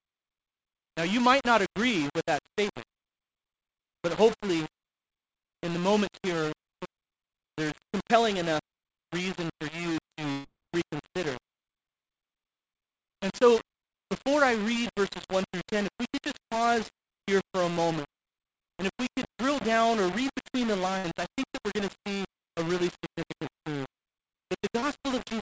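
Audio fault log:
throughout: low bit depth without dither. Coarse grit tracks the sound, roughly 10 dB down, likely from 5-bit rounding; the waveform shows visible stair-steps, the spectrogram a signal-shaped noise haze.
10.32–10.46 s and 20.98–21.06 s: burst of packet loss. About 120 ms and 60 ms lost, bridged by a fading repeat; spectrogram shows smeared, decaying frames, then audio resumes with content skipped.
24.80–24.84 s: short concealed packet loss. About 20 ms went missing and was patched from the preceding sound, heard as a brief smear; spectrogram shows a short blurred patch.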